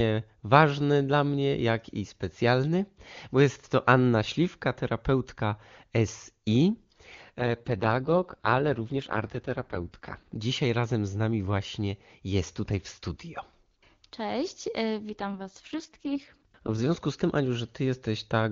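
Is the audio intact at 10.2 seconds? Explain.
No. An AMR rate drop runs from 7.39 to 10.36 s: the speech turns rough and raspy, fitting a fall from 23.85 to 6.6 kbit/s. The bandwidth stays full and there is no gap, unlike a dropout.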